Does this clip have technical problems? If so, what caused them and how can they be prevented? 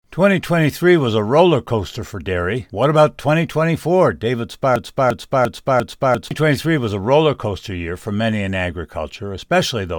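Yes: a broken-record loop from 4.76 to 6.31 s, before "was a roller coaster", repeats one 0.35 s fragment exactly four times. This was likely a stalled player or stream resending its last buffer. Identical repeats, rather than gaps or clicks, set it apart from dropouts. Larger buffers and a stall watchdog that outputs silence instead of looping prevent it.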